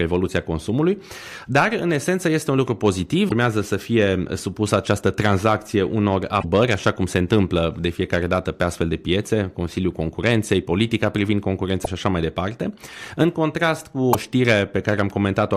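Speech with damaged data in a compressed stream: brief glitches at 3.25–3.32, 6.39–6.44, 11.82–11.88 and 14.10–14.15 s, where corrupted frames break decoder sync.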